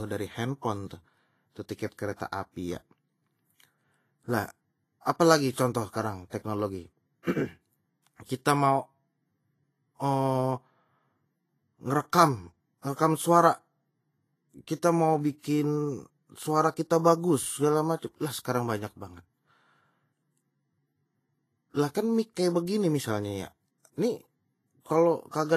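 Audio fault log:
Throughout: Vorbis compression. Speech is grainy and hissy, with nothing above 14.2 kHz, and the upper band is so coarsely quantised that detail turns to noise. The likely cause is a low-rate Vorbis encode near 26 kbps. Unlike broadband background hiss, this grain follows the speech.
1.75–1.79 s, 8.17–8.20 s, 8.25–8.29 s: pre-echo. Short hiss runs 45, 28 and 46 ms ahead of sharp onsets, softening them, because quantisation noise spreads across the whole transform block before each attack. It differs from reverb or echo, which trail after an attack.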